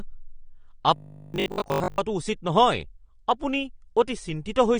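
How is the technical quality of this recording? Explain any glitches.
The recording has two clear technical problems: a constant compression dullness and a one-second robotic stretch.

AAC compression runs through the whole clip. The top of the spectrum is cut off, so the speech sounds dull and smeared, with fizzy sibilants. The likely cause is a low-bitrate encoder, which fits AAC-LC at around 32 kbps, discarding detail it judges inaudible.

From 0.96 to 1.98 s there is robotic sound from repeated short buffers. The speech turns into a rigid, metallic buzz at 50 Hz. That points to a 20 ms chunk being replayed while most of the real audio in that stretch is likely skipped.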